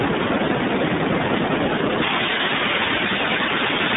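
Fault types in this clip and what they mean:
Wi-Fi interference: A nearby Wi-Fi radio's beacon, sent every 102.4 ms, is rectified by the audio circuit, so a steady tick near ten times a second runs through the speech, well below its level. The fixed rhythm separates it from random crackle or mains hum.
iLBC codec: This narrowband VoIP codec codes each 30 ms frame independently, which fits its 13.33 kbps mode. Nothing passes above 3.8 kHz, and the speech sounds plainly rough and synthetic. Unlike simple band-limiting, the damage is in the texture, not just missing treble.
pre-emphasis left on: From 2.02 s to the end, a treble boost was applied without the matching cut, about 11 dB at 10 kHz relative to 1 kHz on a J.17 curve. The speech turns thin, bright and sibilant. Its sudden onset separates it from a mic's steady bright response.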